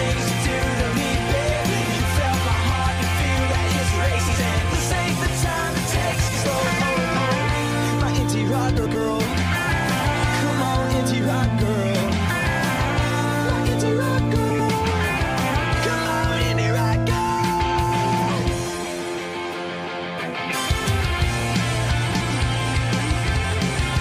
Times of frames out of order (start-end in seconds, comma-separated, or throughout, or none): 4.19-4.38, 6.18-6.38, 8.76-8.96, 14.50-14.70, 22.11-22.31, 23.34-23.54